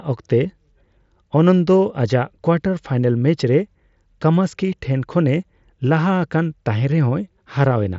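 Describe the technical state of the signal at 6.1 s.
At 6.1 s the speech is intact, carried through the Bluetooth mSBC headset path with its usual band limit near 7.7 kHz and light codec grain, and no fault is present at that moment.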